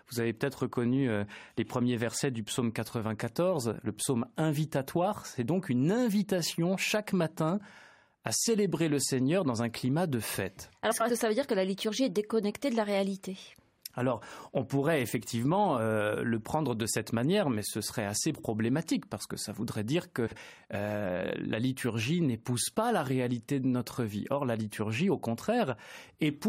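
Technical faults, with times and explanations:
10.91 to 11.10 s, 18.34 to 18.44 s and 20.27 to 20.37 s, frames out of order: in each of these three spots, two adjacent runs of coded frames were decoded in swapped order, so the later slice of speech plays before the earlier one. The swapped halves are about 93 ms each in the first spot and about 46 ms in the other two. The reversal heard as a garbled flutter, and no time is lost.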